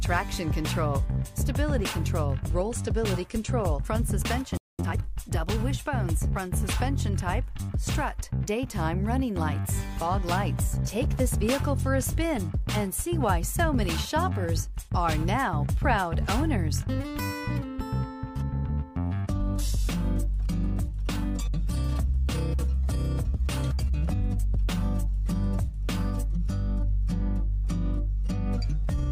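The audio cuts out abruptly at 4.57 s and stays silent until 4.79 s, a gap of about 0.21 s. That is a playback stall, and it likely happened because the player briefly ran dry of buffered data or its output thread was held up, so nothing reached the output until it recovered. Right after the gap, from 4.79 to 4.99 s, the sound rushes forward at twice its normal rate while keeping its pitch. This is time-compressed catch-up: to work off the backlog left by the stall, the player drops short slices of audio and cross-fades the remaining pieces together. Squeezing those 0.2 s to double speed recovers roughly the time lost.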